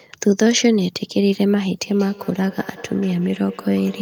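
From about 1.83 s right through to the end, there's feedback echo between two devices. It sounds like two devices in the same room sharing one call: one plays back what the other's mic sent, and that mic hears it again. Each device's echo canceller only strips out its own playback, so this loop slips through. The speech comes back roughly a fifth of a second late, thinner and ringier, peaking at about 21 dB below the speech.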